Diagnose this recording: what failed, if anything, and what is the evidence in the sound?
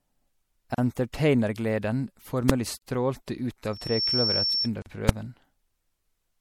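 MP3 compression runs through the whole recording, a codec-stage fault. The speech has a watery, swirling quality and smeared consonant attacks, with plainly audible damage that fits a bitrate around 64 kbps. The likely cause is an encoder short of bits, cutting treble and toggling weak frequency lines between frames.

Gaps at joins of encoded pieces occur at 0.75 s, 2.78 s and 4.82 s, lasting about 35, 40 and 40 ms and recurring every 2.0 s. Separately encoded segments were concatenated without trimming encoder delay and end padding, so short silences with smeared edges interrupt continuous speech.

Invalid numbers at full scale appear at 2.50 s and 5.09 s as single sharp bangs, lasting 1.33 ms and 2.67 ms, which fits 64- and 128-sample processing blocks. A processing or sample-format calculation produced infinite or invalid values, which were clamped to maximum amplitude for each block.

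Loudspeaker feedback squeal runs from 3.73 s to 4.70 s as a 5.4 kHz tone that swells over roughly a third of a second to about 5 dB above the speech. In the acoustic and analogue path, the microphone re-captured its own loudspeaker, and loop gain exceeded one at that frequency.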